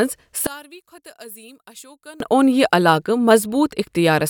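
From 0.47 s to 2.20 s the speech collapses, falling by about 26 dB, so what's left is a faint trace instead of a centred voice with body. It comes back at full strength right as "اوٚن یہِ" begins. That's most likely one channel inverted: one side's polarity got flipped, so when the two channels are summed to mono, everything they share cancels out and only their small differences survive.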